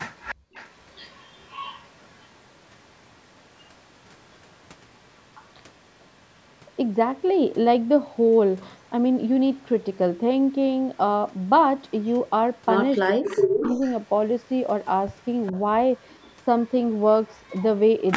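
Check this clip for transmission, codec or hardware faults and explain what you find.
Three echo-canceller faults are present: echo leak, background gated by the echo canceller, and speech suppressed in double talk.

Echo leak, at 0.14–2.28 s, 3.6–5.5 s, 11.88–12.12 s and 13.08–17.64 s: the far end's canceller likely passed loudspeaker pickup back, so a copy of the speech returns 410 ms late. It is faint, around 20 to 40 dB down, in the first three stretches, but loud, roughly 10 dB down, in the last.

Background gated by the echo canceller, 0.35–0.54 s: the canceller clamped the microphone while its loudspeaker played, so room sound drops out, by up to about 38 dB, for roughly a fifth of a second.

Speech suppressed in double talk, 13.16–13.82 s: with both sides talking, the canceller likely muted the local talker, who dips by around 40 dB in fragments totalling about half a second. The band above 8 kHz is empty, as expected from call processing.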